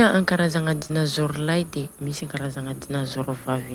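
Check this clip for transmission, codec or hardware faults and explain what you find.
Three closely spaced packet faults damage the speech in a cluster between 0.79 and 0.91 s, involving two kinds of problem.

Short concealed packet loss occurs twice, from 0.79 to 0.83 s and from 0.87 to 0.91 s, the second just before "lay de misy ankarazagna". Each is heard as a brief smear or wobble in the voice. About 20 ms of audio failed to arrive in time, and the decoder covered each hole by extending the preceding sound before easing back into the real signal.

A lost packet rebuilt from error correction sits between these two, from 0.83 to 0.85 s. There is no gap there, but the sound turns momentarily rough and grainy. One packet went missing, and the following packet carried a low-bitrate duplicate of it, so the decoder played that coarser 20 ms copy in its place.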